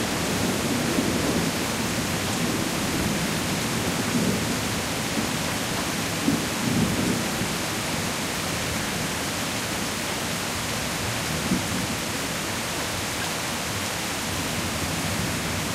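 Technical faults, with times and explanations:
1.36–14.82 s, clock drift buffer slips: a short click recurs every 1.5 s across this span, about ten in all, each where a small block of roughly 15 samples goes missing or is doubled. The likely cause is two devices running on separate clocks that disagree by something like 200 ppm, so the buffer between them creeps toward empty or full until it slips. The abrupt jump in the waveform at each slip is what makes the click.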